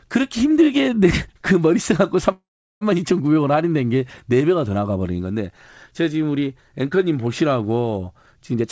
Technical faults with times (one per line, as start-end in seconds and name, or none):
2.32-2.83 call audio freeze
8.54-8.64 jitter buffer speed-up